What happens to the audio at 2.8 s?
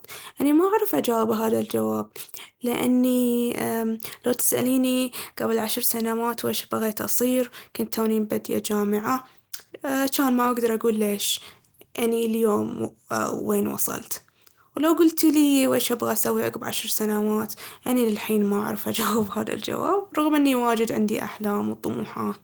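Nothing goes wrong at 2.8 s; the speech continues intact through that moment.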